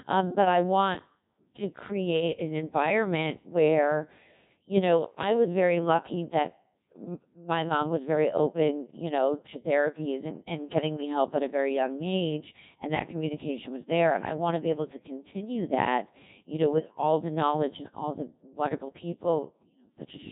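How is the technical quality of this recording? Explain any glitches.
Technical quality is poor: the whole clip has been through a very low-rate digital radio codec.

Codec 2 vocoder damage runs from start to finish. The decoder rebuilds the speech from sine waves using only pitch, voicing, energy and a rough spectral envelope, which fits a rate around 1.6 kbit/s. It sounds heavily robotic and buzzy, with nothing above about 3.8 kHz.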